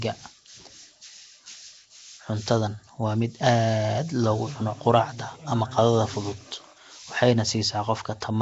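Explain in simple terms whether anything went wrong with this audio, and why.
The speech most likely went through Nellymoser compression, the Flash microphone codec, which packs each block of sound into very few bits and fills weak bands with noise. From start to finish this gives a rough, hissy halo, a smeared underwater quality, and nothing above 7.8 kHz.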